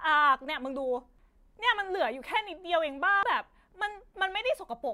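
Damaged data in the compressed stream forces the decoder to lose sync and hunt for the next frame, producing brief glitches, heard as a chirp, squawk, click or short hole, in the speech at 1.19 s and 3.23 s.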